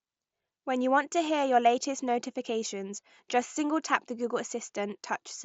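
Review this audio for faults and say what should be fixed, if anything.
At 3.54 s there's a short concealed Bluetooth headset packet loss, about 15 ms of missing audio, which fits a couple of dropped packets between headset and phone. The receiver covered the gap by repeating the best-matching slice of the sound just before it, so rather than a click you get a brief patch of buzzy, held tone before the real signal picks back up, all riding on the 8 kHz-wide mSBC headset link. To prevent it, keep the headset close to the phone with a clear line of sight and away from busy 2.4 GHz Wi-Fi.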